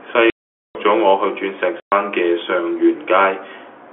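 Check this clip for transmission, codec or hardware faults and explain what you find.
Two dropouts from packet loss filled with silence, 0.3 to 0.75 s and 1.8 to 1.92 s. The speech cuts to dead silence with hard edges, unlike concealment's smeared repeats. Gap lengths fit 30 ms packets. The narrow telephone band comes from G.711 coding.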